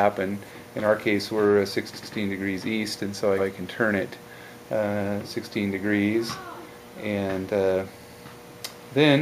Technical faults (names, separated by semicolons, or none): repeated frames